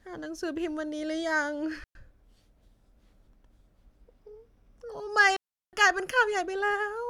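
Speech with two digital wireless dropouts, at 1.84 to 1.95 s (about 114 ms) and 5.36 to 5.73 s (about 365 ms). The receiver mutes cleanly into near silence, with no hiss or crackle bursts like an analogue link losing signal.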